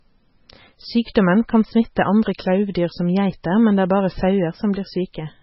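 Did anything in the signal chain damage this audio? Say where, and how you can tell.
Yes, at the codec stage, throughout the speech: nothing is present above 5.6 kHz, and the remaining band sounds watery and swirly with smeared consonant attacks. This is likely heavy MP3 compression at a very low bitrate, around 16 kbps, where the encoder cuts the treble and drops weak spectral lines frame by frame.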